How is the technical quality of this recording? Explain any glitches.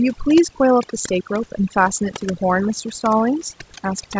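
The recording carries processing damage throughout, plus one brief dropout near the end.

Overdone noise removal runs through the whole clip. The suppressor was pushed far beyond what room noise about 37 dB below the speech required. Individual frequency bands near its noise estimate are cut almost to nothing, and quieter parts of the voice are pulled down with them. The background falls to near silence dotted with twinkling specks. The absence of anything above 8 kHz fits a wideband call codec such as G.722.

From 3.74 to 3.76 s the sound gives way to steady, featureless noise for about 20 ms, with roughly 10 ms of actual speech missing. This is likely sound dropped by the voice detector. The sender classified a quiet stretch as background and stopped transmitting, and the receiver filled the gap with generated comfort noise. The effect is a short blank patch before the speech resumes when the detector triggers again.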